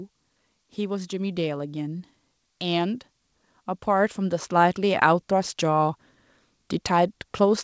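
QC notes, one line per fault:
3.84–5.97 s, automatic gain rising: the gain control judged the incoming level too low and lifted its gain gradually over about two seconds, ending roughly 4 dB higher. Because the gain acts on the whole signal, the speech and the background noise swell together rather than the voice alone getting louder, so the room seems to creep closer. The call path's band limit, with nothing above 8 kHz as expected from a wideband codec like G.722, stays unchanged through the rise.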